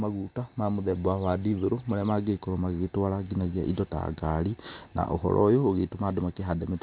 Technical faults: aliasing

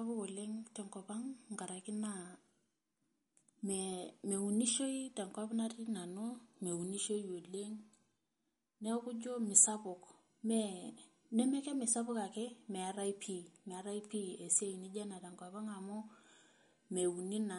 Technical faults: MP3 compression

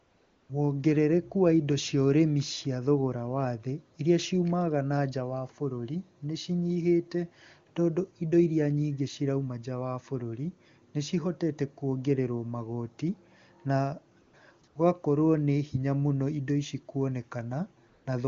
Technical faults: AMR comfort noise

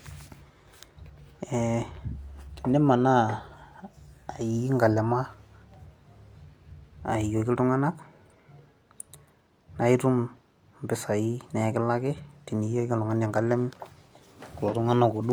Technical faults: none

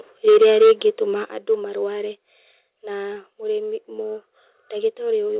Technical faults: microphone overload; microphone volume stepped down; short concealed packet loss

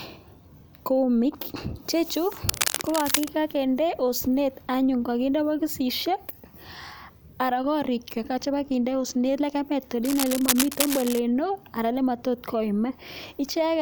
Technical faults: cable scratch noise

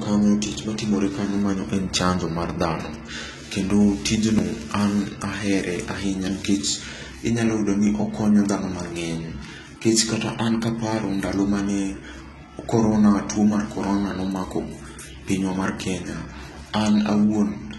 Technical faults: HE-AAC compression

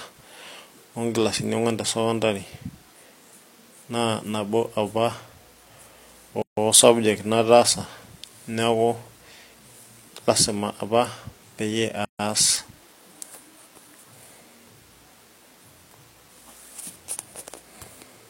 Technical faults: gap at a join of encoded pieces

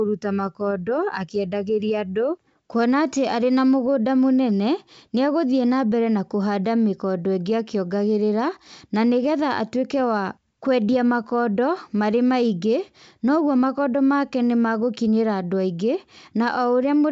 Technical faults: none

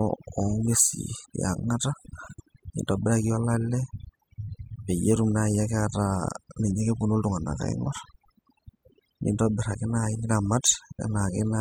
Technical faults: overdone noise removal

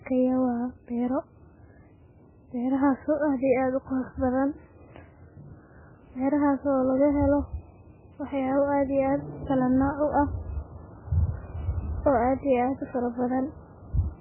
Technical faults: MP3 compression

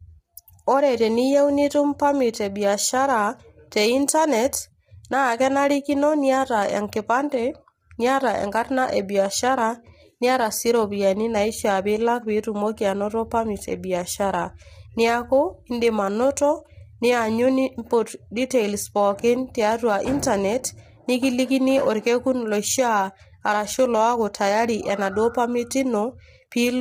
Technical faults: low-delay AAC compression

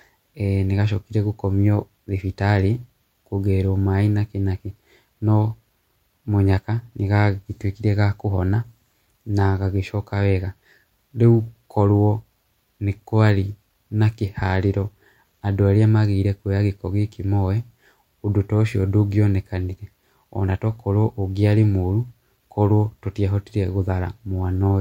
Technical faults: none

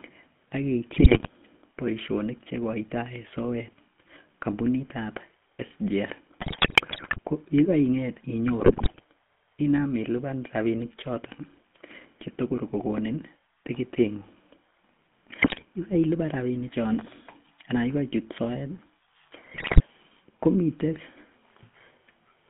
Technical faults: GSM full-rate codec; GSM bit errors

